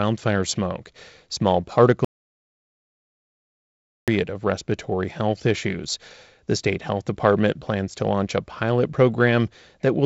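From 2.05 to 4.08 s, an audio dropout to silence cuts the speech to dead silence, likely from a lost input. The waveform is a flat line and the spectrogram goes blank, up to "of respiratory health issues".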